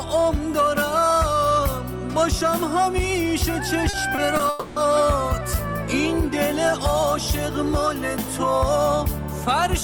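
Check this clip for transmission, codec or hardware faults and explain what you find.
The clip has a cluster of late-delivery faults between about 3.9 and 4.8 s: three short stalls from a late packet, then a longer call audio freeze.

Short stalls from a late packet occur at 3.89–3.95 s, 4.15–4.19 s and 4.37–4.41 s. Each time the jitter buffer briefly ran dry, so the last sound was stretched for 40, 20 and 20 ms, heard as a held sound with a slight buzz or dip. Unlike packet loss, nothing is skipped. The audio resumes where it stopped, just slightly later.

The call audio freeze runs from 4.49 to 4.78 s. The sound hangs as a fading buzz or hiss for about 270 ms and never drops to silence, likely because packets were held up long enough to empty the buffer. It differs from the stalls by its length, and no content is lost afterwards.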